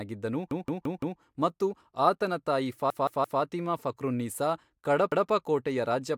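At 0.51 s a repeated buffer makes the speech stutter. A single 0.17 s slice, which fits an 8192-sample buffer, plays four extra times until 1.20 s, just before "ಮತ್ತು ಆತನ ತಾಯಿ". Right after that phrase, from 2.90 to 3.41 s, a slice repeats three extra times, and at 5.12 s one slice repeats once. New audio arrived late, so the device replayed its last block. Unlike a dropout, no sound goes missing; identical pieces recur, each joined by a hard edge.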